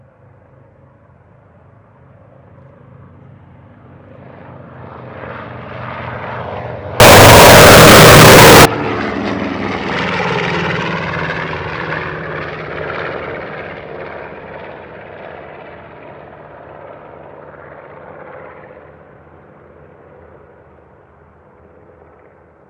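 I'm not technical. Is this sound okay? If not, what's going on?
No. From 7.0 to 8.65 s the sound turns into a loud, harsh buzz. This is most likely float read as integer: audio stored as 32-bit floating-point numbers was read as whole numbers, so the raw bit patterns become a nearly square wave. Ordinary clipping flattens only loud peaks. Here even quiet moments and background noise jump to the same loudness, though the basic pitch can still be followed.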